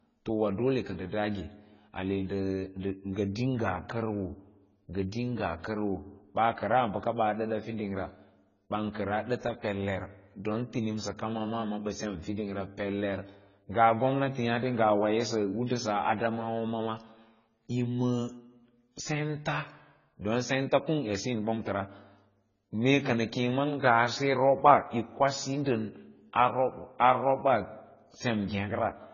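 From start to finish the speech sounds dull and smeared, with heavy codec damage: nothing survives above 7 kHz, and what remains beneath that cut-off has a warbling, unstable texture. The likely cause is AAC compression (AAC-LC) at a very low bitrate, which fits a stream of around 16 kbps. At that rate the encoder lowers its bandwidth limit and quantises the remaining spectrum so coarsely that detail is stripped out or patched over.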